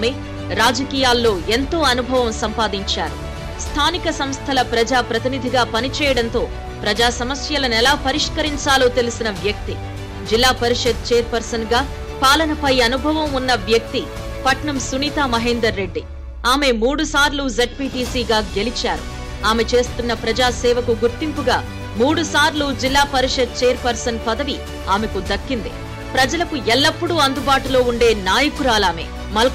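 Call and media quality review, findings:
No audible faults found in this recording.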